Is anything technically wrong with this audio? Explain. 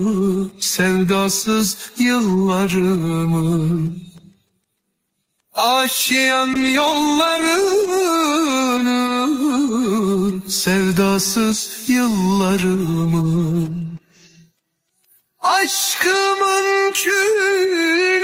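Yes, one thing. From 6.54 to 8.83 s there's a call bitrate drop. The encoder got starved of bits, consistent with a fall from about 32 to 15 kbps, so the sound turns coarse for about 1.5 s before recovering.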